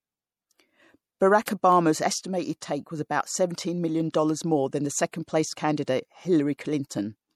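All the way through, the speech has a watery, swirly edge, most likely MP3 compression, which fits a low bitrate around 64 kbps. At 1.45 to 1.48 s there's pre-echo: codec noise smeared across 24 ms before a sharp attack, heard as a brief hiss that softens it. Then single sharp clicks at 1.72 s and 6.36 s, likely dropped samples, where a couple of samples vanish and the waveform jumps.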